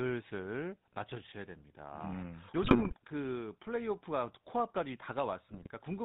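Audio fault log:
throughout, GSM full-rate codec: plainly audible buzzy, gravelly roughness from pulse-excited vocal-tract modelling at 13 kbps, with nothing above 4 kHz passing.
2.62–2.93 s and 5.50–5.68 s, GSM bit errors: corrupted filter, pitch and gain values distort frames, breaking speech into squawks, pops and gargling, heavier in the first burst.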